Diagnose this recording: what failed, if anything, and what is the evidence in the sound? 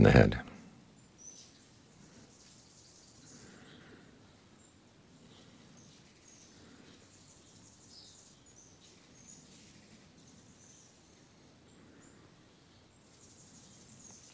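Nothing has failed: the audio carries the ordinary signature of a wideband call path, with no content above 8 kHz and the coding character expected of G.722 at a rate that fits 64 kbps, and no dropout, glitch or distortion stands out from that.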